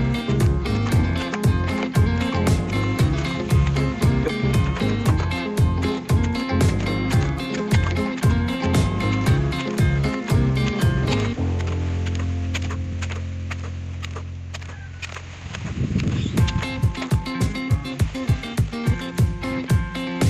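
At 7.57 to 7.62 s the audio jumps abruptly forward, a stream segment skipped, likely because one segment failed to load and playback resumed with the next. It sounds like a sudden lurch with a small blip. The waveform shows a hard discontinuity, and the spectrogram shows a thin vertical click where the textures fail to line up.

From 16.72 to 19.14 s a time-stretched section plays at 1.77 times normal pace with unchanged pitch, likely squeezed by software that dropped short pieces to fit. It sounds rushed. The spectrogram shows compressed events at steady frequencies, with small seams between spliced grains.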